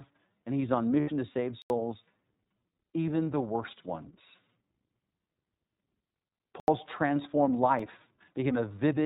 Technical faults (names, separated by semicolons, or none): iLBC codec; lost iLBC frames; block of digital silence